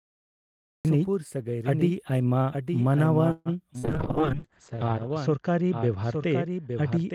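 The speech opens with digital silence and cuts in at 0.85 s mid-sound. This cut-off start has no attack and no fade-in, so the recording or stream began late rather than the talker starting from a pause.

Throughout, a doubled audio track runs underneath. A second full-band copy trails by roughly a second, about 5 dB quieter, with no decay or room colour. That sets it apart from an echo or reverb tail, and it is likely a second capture path or misaligned edit.

From 3.31 to 3.49 s there is a call audio freeze. The last sound is held and fades for about 140 ms, then the speech carries on from where it stopped. Nothing is lost, only delayed, which is likely the jitter buffer running dry while packets were held up.

At 3.74 s playback skips ahead. Roughly 70 ms vanish, and the two sides are joined almost directly with only about 7 ms of filler. Unlike the freeze, this removes sound instead of inserting a gap.

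Immediately after, from 3.78 to 3.86 s, a burst of packet loss takes out about 80 ms. The receiver extends the last sound for 50 ms as a fading held tone before resuming further on. That concealment tail distinguishes it from the clean skip just before.

From 3.80 s to the end, a call bitrate drop from 32 to 8 kbps leaves the speech rough and muffled. The bandwidth narrows from 20 kHz to 8 kHz, a lasting change in tone rather than a momentary glitch.

Between 3.98 and 5.14 s a jitter buffer slow-down repeats pitch periods and pause fragments, adding 86 ms. Speech runs at about 93% speed with unchanged pitch, drawn out. That is stretching, not a pitch shift.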